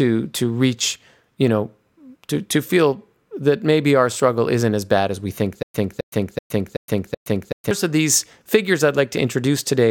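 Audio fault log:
5.63–7.71 s, stutter with silent gaps: a 263 ms speech fragment repeats five times, each followed by about 117 ms of digital silence; likely a stalled stream replaying its last buffer.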